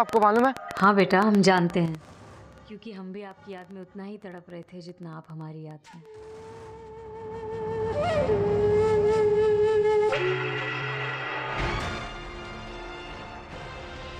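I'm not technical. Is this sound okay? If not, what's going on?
No. From 0.09 to 6.07 s there is a train of clicks: ticking about eight times a second at an uneven pace, even in pauses, likely from interference or a faulty connection or power supply.

Zipper noise is different because it only happens while the volume moves. From 1.77 to 2.14 s the sound drops in a few big steps, and from 6.87 to 8.27 s it rises in many small steps. Each step adds a tiny click, about ten a second.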